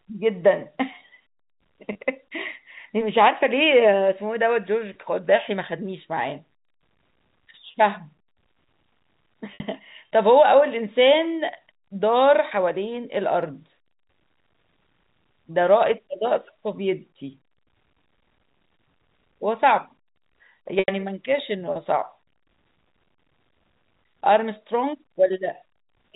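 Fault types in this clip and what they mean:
Packet loss with pitch repetition: lost chunks get patched by looping the last pitch cycle, giving four gaps of 30 to 90 ms, the shortest heard as brief buzzy holds and the longest fading into silence.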